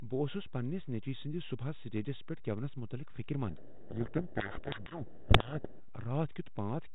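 A DC offset runs through the whole clip. The waveform sits shifted off zero by a constant amount. You cannot hear it as a tone. It shows up as steady energy at the very bottom of the spectrum. It also eats into headroom, so peaks on one side have less room than they should. Removing it needs only a high-pass filter at a few hertz.

From 3.48 to 5.79 s there is a codec payload misread. The speech is coded with G.726 ADPCM, whose light hiss and 4 kHz band limit fit a 32 kbit/s DECT-style link. In this stretch the decoder reads each code word with its bits in the wrong order. It still gets valid-looking values, but they are the wrong ones. The speech drowns in harsh, rasping distortion. Normal sound returns at 5.79 s, once both ends agree on the packing.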